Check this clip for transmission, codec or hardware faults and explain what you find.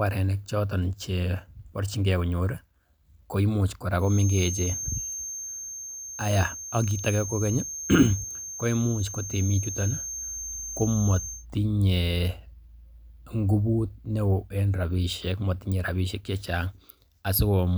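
One fault stands out in the speech. From 3.97 s to 11.47 s a feedback whistle sits behind the voice. It is a thin, steady tone at 6.4 kHz, roughly 10 dB below the speech, and its level swells and fades slowly. The likely cause is a loudspeaker-to-microphone loop held just at the edge of instability. One high frequency keeps recirculating without building into a full howl.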